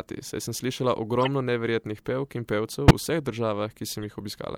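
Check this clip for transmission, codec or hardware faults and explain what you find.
A codec fault shows up in this speech: three bursts of corrupt frame decoded, at 1.21–1.28 s (moderately loud), 2.88–2.92 s (the loudest, around -5 dBFS) and 4.03 s (faint). Damaged frames were decoded anyway, so misread gains and codes throw energy onto wrong frequencies. The result is brief chirps and noise blips lasting a frame or a few, not the silence or smeared repetition heard when lost frames are concealed.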